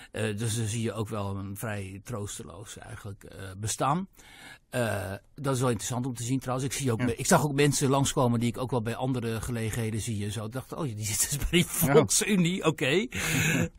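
A recording of speech, with no technical fault to be heard in it. Nothing in the audio calls for a time or a cause to be noted.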